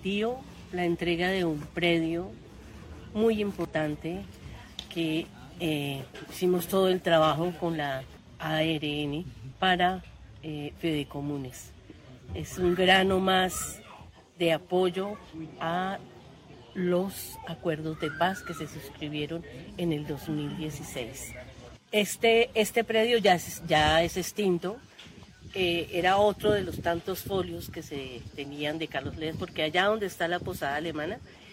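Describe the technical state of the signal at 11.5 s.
At 11.5 s there's a short burst of damaged data in the compressed stream, running from about 11.50 to 11.54 s, so roughly 40 ms. Some of the encoded bytes there are corrupt, so the decoder can't read those frames properly, drops sync and has to hunt for the next valid frame header before it can pick the audio back up. What you hear is a brief chirp, squawk, click or short hole cutting across the sound.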